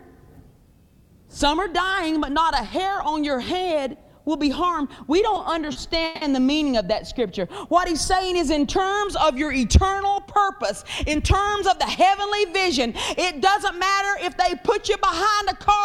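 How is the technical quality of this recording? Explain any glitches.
The recording has two brief playback glitches close together, both from delayed network packets.

At 5.72 s, one sound is held about 30 ms too long with a faint buzz or dip. This is a short stall from a late packet: the receiver stretched the last sound until the packet arrived.

From 6.05 to 6.24 s, the sound freezes into a fading buzz or hiss for about 160 ms before resuming where it stopped. This call audio freeze was likely caused by held-up packets draining the jitter buffer.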